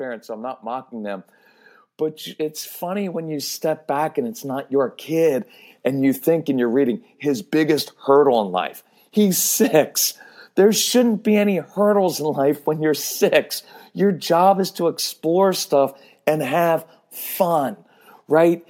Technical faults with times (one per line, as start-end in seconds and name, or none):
0.26-1.33 automatic gain rising
2.80-5.02 automatic gain rising